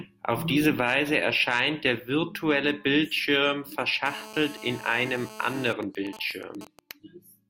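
From 4.06 to 5.73 s, a 2G handset in an active call close to the recording chain causes GSM phone buzz. Its transmitter pulses at 217 times a second, and some stage of the audio circuitry rectifies that radio energy into the signal path. The result is a hard, raspy 217 Hz buzz rich in harmonics, sitting about 17 dB below the speech. It runs steadily underneath the speech and bears no relation to it.

Starting at 5.83 s and lasting until 6.91 s, the buzz gives way to GSM signalling bursts. A phone is in a call but its user has gone silent, so the handset transmits only short clusters of radio bursts at the same 217 Hz rate, and the audio circuitry again rectifies them. These are heard as even ticks with a longer 217 Hz buzz twice a second, roughly 15 dB below the speech.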